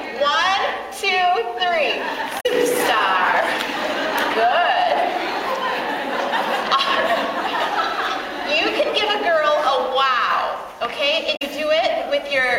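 The audio has two brief bursts of damaged data in a compressed stream, from 2.37 to 2.46 s and from 11.33 to 11.42 s. Each lasts about 95 ms. Corrupted bytes made the decoder misread frames and lose sync, producing a short garbled blip.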